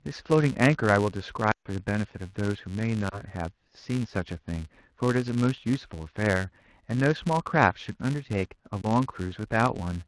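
Speech, with a buzz at 188 Hz running through the whole clip from a filter restarted on every block. The filter drops its state at each block boundary and starts again from silence, so every block opens with a small transient. The spacing fits a 128-sample block. On a waveform this shows as evenly spaced ticks that grow and shrink with the speech level. A spectrogram shows a comb of harmonics at multiples of 188 Hz that brightens in loud passages and fades in pauses. There are also lost AMR speech frames, heard over the wideband AMR coding that carries the voice. From 1.51 to 1.67 s a run of about 140 ms fails. The decoder repeats the last good pitch and vocal tract settings at falling gain, so the sound drops to near silence within two frames, and the voice returns weak or rough. Single lost frames at 3.10 and 8.82 s give only a brief dip or warble. In the waveform these are short envelope sags. 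In the spectrogram they look like smeared, flattened harmonics that lose energy.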